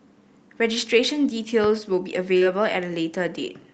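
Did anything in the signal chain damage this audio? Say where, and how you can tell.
Yes. A loud pop at 1.64 to 1.67 s, a single sharp thump about 10 dB above the speech, which carries on beneath it. A sudden voltage step in the analogue wiring, likely from a plug, switch or static discharge, was shaped by the following circuits into this pulse.

Short concealed packet loss at 2.37 to 2.45 s, in the network stage: about 40 ms of speech never arrived, and the receiver filled 38 ms by extending the preceding sound, adding around 10 ms. This is heard as a brief smear before the real audio blends back in.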